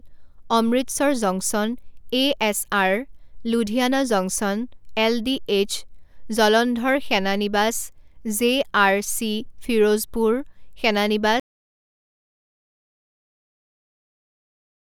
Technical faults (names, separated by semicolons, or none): audio dropout to silence